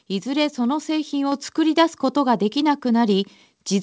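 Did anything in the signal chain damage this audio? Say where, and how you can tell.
Yes. At 1.32 s the call software's gain control raised the device's analogue input level in one jump of about 4 dB, a microphone volume step-up. Background noise rises with the speech, so it is not the talker getting louder. It is instant, not a gradual compressor ride, all within band-limited G.722 audio with nothing above 8 kHz.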